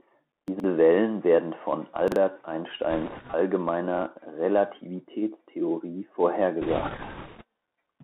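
It's a speech clip, and it's clearly come through the Bluetooth CVSD headset codec. The line is squeezed to roughly 250 Hz to 3.7 kHz, the s sounds turn scratchy, loud bright bits distort where the adaptive step can't keep up, and there's a grainy hiss underneath, all consistent with a 64 kbps CVSD stream. There are also two spots where chunks play out of order. At 0.48 to 0.64 s a 40 ms chunk turns up three chunks late, and at 2.08 to 2.16 s another lands one chunk late. Nothing's missing, but you get a jumbled moment with hard joins. Finally, there are bit errors on the Bluetooth voice link. From 2.90 to 3.35 s a rushing crackle rides on the speech, at an error rate of around 3 percent. It comes back much heavier from 6.62 to 7.44 s, at around 7 percent. Because each bit carries so little weight, it's a hiss-like crackle rather than sharp pops.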